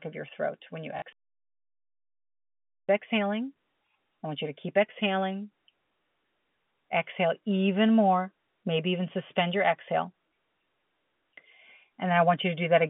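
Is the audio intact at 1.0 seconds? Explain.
No. From 0.99 to 1.02 s there is packet loss with the last packet repeated. About 30 ms of audio went missing, which points to a single lost packet, and the receiver filled the gap by replaying the packet just before it. With only one packet repeated, the moment comes across as a small blip.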